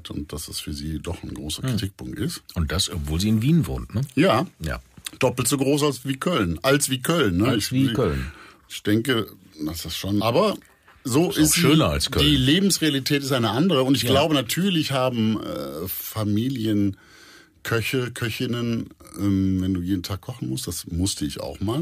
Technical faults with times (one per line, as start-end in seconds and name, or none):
1.77 damaged data in a compressed stream
10.20 damaged data in a compressed stream